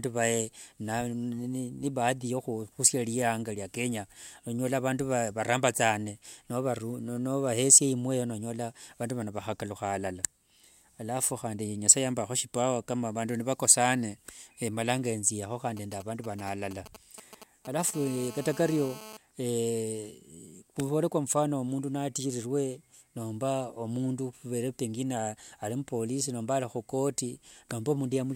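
From 15.77 to 17.91 s, GSM signalling bursts intrude on the speech: a nearby 2G phone emits short groups of radio pulses that the audio circuit rectifies, giving a galloping dit-dit-dit of short buzzes at 216.7 Hz, roughly 15 dB below the speech. A spectrogram shows clustered vertical stripes with a harmonic comb.

From 17.94 to 19.17 s, a GSM phone buzz follows as the phone settles into a call. Steady 216.7 Hz transmission bursts, rectified by the circuit, produce a hard, raspy buzz about 16 dB below the speech. The waveform carries a regular pulse train, and the spectrogram shows continuous horizontal harmonics stacked at 216.7 Hz spacing.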